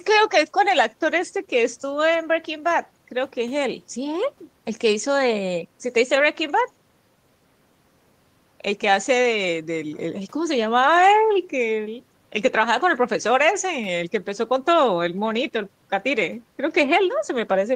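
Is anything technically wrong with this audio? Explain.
No, nothing is technically wrong with this audio.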